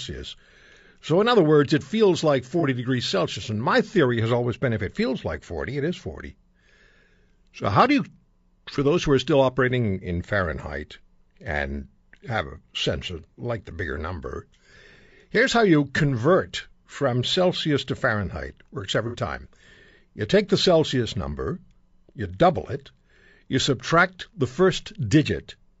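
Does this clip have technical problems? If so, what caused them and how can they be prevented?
Yes. Throughout, the sound is rough and grainy, with noise between harmonics and a synthetic-sounding top band, likely from low-delay AAC compression (AAC-ELD) at a bitrate that fits about 32 kbps. Giving the codec a higher bitrate would prevent this.

At 2.60 to 2.64 s, just after "words it feels like", and at 19.07 to 19.16 s, brief smeared, noisy patches come from AAC frame loss with concealment, where the decoder rebuilds missing frames from the last good spectrum. Protecting the transmission against packet loss, for example with forward error correction or a larger jitter buffer, would prevent these gaps.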